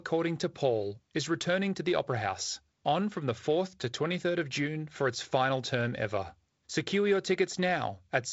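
This speech clip has no technical faults to report. It comes through the G.722 wideband telephone coding path with nothing above about 7.7 kHz and a light coding texture in the upper band, which fits G.722 running at 48 kbit/s.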